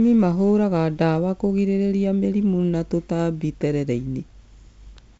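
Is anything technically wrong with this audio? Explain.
No, nothing's actually wrong here: it's just speech carried over G.722 wideband telephone coding, so the sound tops out around 7.7 kHz with the light coding texture you'd expect from that path, which fits a 56 kbit/s setting.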